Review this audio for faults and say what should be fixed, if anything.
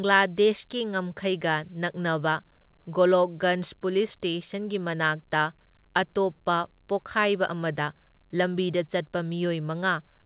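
Nothing stood out on listening to this speech recording, so there is nothing here that needs fixing.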